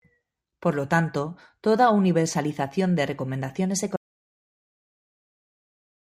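At 3.96 s, right after "toda universalización de recomendaciones", the speech cuts off abruptly into silence with no room tone, lasting to the end of the clip. This audio dropout to silence likely comes from a lost input, with the recorder writing silence.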